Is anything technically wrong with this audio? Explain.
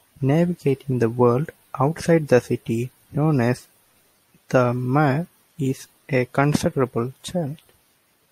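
Yes. Throughout the speech there is plainly audible damage, likely from MP3 compression. The sound turns watery. S sounds chirp metallically. The encoder, short of bits, drops weak frequency lines frame by frame. This fits a bitrate around 64 kbps.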